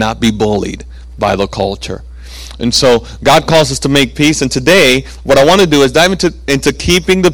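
Hard clipping runs through the whole speech clip. The signal was driven about 16 dB beyond what a stage in the chain could pass, so the waveform tops were sliced flat, with roughly 7 percent of the samples over the limit. Those squared-off peaks generate harmonics reaching far up the spectrum. With overload this large, every louder syllable carries a harsh, gritty fuzz, not just occasional crackle on the highest peaks.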